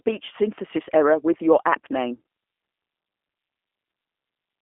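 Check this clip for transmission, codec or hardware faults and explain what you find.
One codec fault runs through the whole clip. Throughout, the speech sounds rough and synthetic within a 250 Hz to 3.4 kHz band. This is G.729 codec damage: the codec rebuilds each frame from a vocal-tract filter and sparse pulses, which fits 8 kbit/s.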